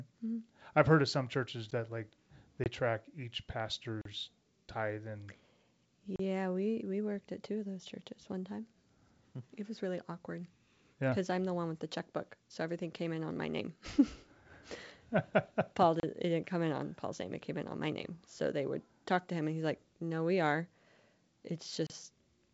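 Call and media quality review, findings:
Block of digital silence: hard dropouts at 1.71 s (about 10.7 ms, after "heard of some churches"), 4.01–4.05 s (after "like they track each"), 6.16–6.19 s (before "we we worked at"), 15.999–16.03 s and 21.87–21.90 s. Probable component: playout/render thread missing its buffer deadline, zero-filled. The 10.7 ms gap fits a 512-sample buffer. Waveform: flat line with abrupt edges. Spectrogram: blank vertical strips.

Packet loss on an ADPCM call: 20 ms hole at 2.64–2.68 s, likely one lost packet on the G.722 64 kbit/s path. Decoder predictor and step size desync. Speech resumes slightly distorted, settling within tens of milliseconds. Spectrogram: empty slot.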